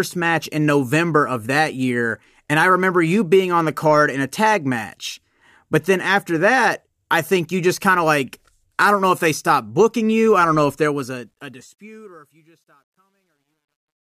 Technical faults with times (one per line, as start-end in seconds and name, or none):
10.76-14.00 truncation distortion on a fade